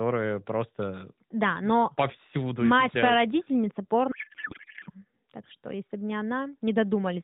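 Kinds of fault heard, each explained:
Codec payload misread: The decoder unpacks the AMR frames with their bit fields in the wrong places. This fits octet-aligned packing read as bandwidth-efficient. From 4.12 to 4.90 s the speech becomes garbled noise and warble that barely follows it. Then narrowband AMR sound resumes.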